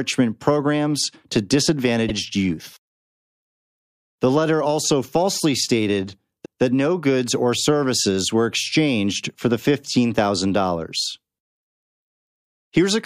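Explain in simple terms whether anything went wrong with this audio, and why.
Repeated frames: at 2.08 s a 52 ms slice of speech plays twice, and at 6.44 s a 157 ms slice does, heard as stutters. Unlike a dropout, nothing goes missing; sound is added instead.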